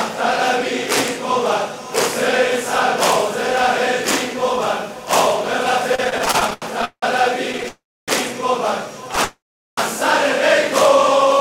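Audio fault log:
5.95–7.04 s and 7.52–7.66 s, repeated stalls (stutter): late packets keep draining the jitter buffer. Thirteen stop-start gaps up to 178 ms, then four tiny ones, drag the sound without losing any.
7.68–8.10 s and 9.24–9.79 s, call audio freeze: the last sound hangs, then fades to silence for about 0.29 s and 0.4 s. Packets were likely held up, so playback resumes where it left off.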